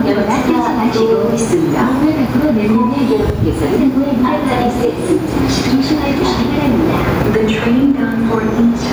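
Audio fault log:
Throughout: gain pumping. The gain ducks each time a louder sound arrives and recovers between them, a swing of around 10 dB, so quiet and loud passages sit unnaturally close together and the whole clip feels squashed. The likely cause is input gain set far too high for the microphone, with a fast limiter or compressor clamping down on each peak and releasing between them.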